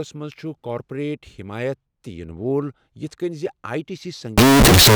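Right after "آیی ٹی", from 4.38 s to the end, 16-bit samples were likely read with the wrong sign convention (signed and unsigned mixed up), flipping every zero crossing into full-range jumps and causing extremely loud, harsh distortion throughout.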